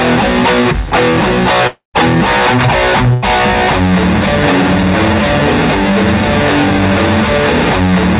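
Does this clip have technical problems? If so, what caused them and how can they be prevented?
Yes. At 1.67 to 1.97 s the stream was likely hit by a long network dropout. No packets reached the receiver, which stretched the last music into a fading sound for about 0.27 s, ending in roughly 0.13 s of near silence. The music then resumes with about 0.27 s missing. A steadier connection, such as wired rather than wireless, with redundancy or forward error correction, would prevent this.

At 3.14 to 3.25 s a burst of packet loss removed a short run of packets from the G.711 call path, which carries nothing above 4 kHz. The receiver concealed the gap by holding the last sound and fading it for about 86 ms, and about 90 ms of music is skipped. Forward error correction or redundant packets, with a slightly deeper jitter buffer, would prevent this.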